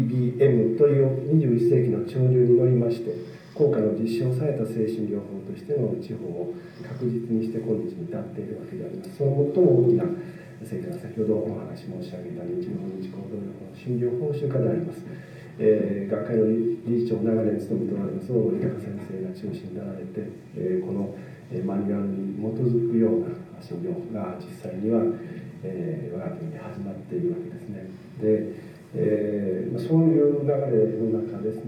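Throughout the clip the top end sounds dulled, with a faint metallic shimmer on bright, hissy sounds. This is imaging from linear upsampling, consistent with a 22 kHz to 44.1 kHz conversion. Straight-line interpolation leaves weak mirrored copies, roughly 50 dB down, between 11.03 and 22.05 kHz.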